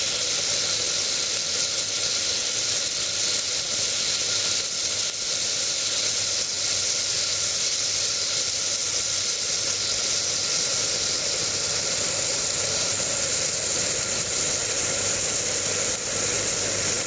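Gain pumping runs through the whole clip: the gain swings by roughly 10 dB, ducking under each loud sound, which squashes loud and soft parts together. This likely comes from gain set far too high and a fast limiter clamping down.

Clock drift between sender and receiver is also present throughout. The sending clock runs about 2 % slow relative to the receiving one, so the jitter buffer keeps draining and must be topped up, producing small, unevenly spaced timing hiccups across the clip.

Repeated timing corrections run from 0.78 s to 16.96 s. The receiver keeps repeating short pieces to stay in step with the slower sender, playing the audio at about 98 % speed and adding roughly 300 ms overall, heard if at all as slight stutters and an unsteady pace. The G.722 call path carries nothing above 8 kHz.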